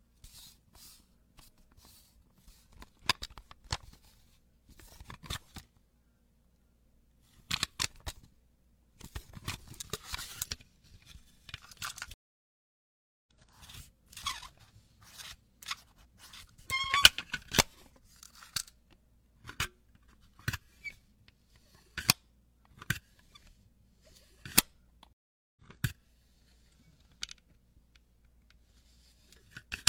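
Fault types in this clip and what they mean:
Stream reconnect: the connection broke and the player restarted its decoder mid-stream. The audio goes silent for 1.13 s at 12.14 s, then for 0.44 s at 25.13 s. Each time it resumes further on, skipping roughly 1.5 s, then about half a second.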